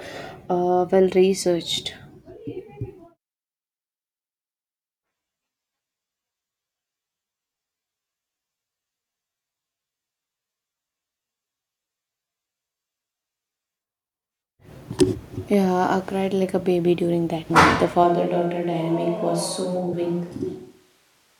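At 15.32 s the speech jumps forward with a brief smeared blip: compressed frames skipped. Whole frames never reached the output, here a couple of 26.1 ms frames, so around 50 ms of audio is simply gone. The same happens at 17.49 s, where about four frames (roughly a tenth of a second) vanish. Unlike a dropout, there is no gap of silence, and unlike a click, the join is soft because overlapping frames blend across it.

From 18.04 s to the end the sound turns abruptly roomy and hollow, with thinner bass. The change is most likely a switch to a distant microphone after the close one stopped contributing. Overall level barely shifts, and faint room noise sits roughly 40 dB under the speech. A reverb or EQ effect would not arrive at a single instant with that room character. Within this stretch, at 19.92 s, a third skip removes about three frames, some 70 ms.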